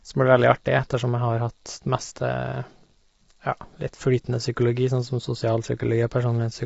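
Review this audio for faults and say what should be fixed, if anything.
Throughout the speech, the sound is rough and grainy: noise fills the gaps between the pitch harmonics, and nothing is present above 7.7 kHz. This is likely low-delay AAC compression (AAC-ELD). Its short frames resolve pitch harmonics poorly, and the damage fits a bitrate of around 24 kbps, which leaves too few bits to code them cleanly. On a spectrogram, the harmonic lines look smeared, with speckled energy between them and a flat, hard ceiling at 7.7 kHz. To prevent it, encode at a higher bitrate or use a codec mode with longer frames when low delay isn't required.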